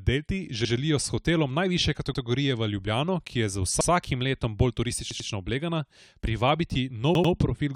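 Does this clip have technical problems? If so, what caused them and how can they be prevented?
Yes: repeated buffer stutters at 0.65, 2.14 and 3.81 s (one repeat) and 5.11 and 7.15 s (two repeats). A late device replayed its last 93 ms chunk, which fits a 4096-sample buffer, leaving identical waveform blocks with hard vertical seams on the spectrogram. Larger output buffers or a higher-priority audio thread prevent it.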